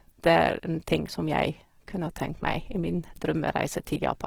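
Throughout the speech there is plainly audible damage that likely comes from Opus compression. The sound stays full-band, reaching up to about 20.4 kHz. But the detail within the bands is rough and grainy. With too few bits to go round, the encoder kept each band's energy and filled the gaps with folded or noise-like content. Tonal parts turn hissy rather than swirly. This fits a low rate near 16 kbps in the music mode.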